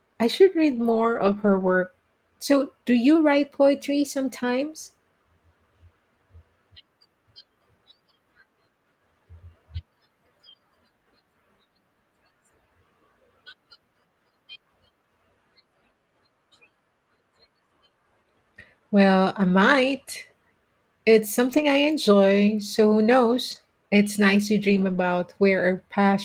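Lost packets rebuilt from error correction come first, from 0.71 to 1.73 s just after "I should". About half a second of audio turns rough and noisy. Those frames were lost, and the decoder played the low-bitrate copies carried in the following packets. There is no silent gap, which is what separates this from a dropout or an ordinary concealment hole.

From 3.15 to 4.62 s the audio plays about 5.7% fast and sits roughly a semitone sharp (about 95 cents). Then it snaps back. This is likely a drift correction step, with a clock-matching resampler changing rate to manage its buffer. Speed and pitch move together, unlike a pitch-only shift. A brief rebuilt patch falls inside it at 3.43 to 3.45 s.

The same rebuilt-packet roughness returns at 19.43 to 19.49 s (40 ms) and at 21.49 to 21.63 s (80 ms). It recurs at 23.51 to 23.57 s after "so who" and at 24.69 to 25.03 s after "nice to", about 180 ms.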